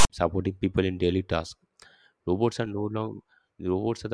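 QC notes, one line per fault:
0.00 to 0.10 s, file tags played as audio: a block of text tag bytes is decoded as samples, giving a harsh, lopsided rasp pushed toward one side of the waveform, then dead silence where zero padding follows. Unlike a click or dropout, it has hard square edges and sits before the speech begins.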